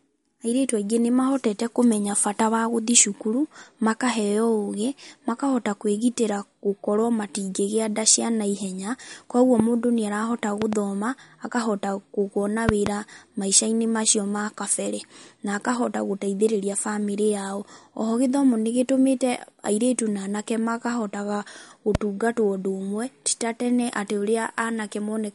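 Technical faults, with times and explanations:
Throughout: MP3 compression. The speech sounds watery and swirly, with metallic chirps on sibilants and nothing above 11.2 kHz. The likely cause is an encoder short of bits, which fits about 48 kbps, cutting the treble and switching weak frequency lines on and off between frames.
9.60–9.62, 10.62–10.75, 12.69–12.89 and 21.95–21.97 s: loud pop. Sharp pops sit about 15 to 20 dB above the speech, single after "nda cia naihenya kwoguo" and "airĩtu na anake makahotaga", double at 10.62 and 12.69 s, with the speech continuing underneath. A sudden voltage pulse from a plug, switch or static is the likely cause.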